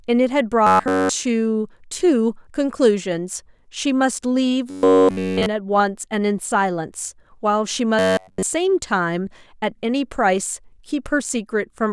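Speech with robotic sound from repeated short buffers at 0.67–1.09 s, 4.70–5.48 s and 7.99–8.43 s, a stiff metallic buzz near 94 Hz. Likely the playback kept looping a roughly 11 ms chunk while fresh audio was skipped.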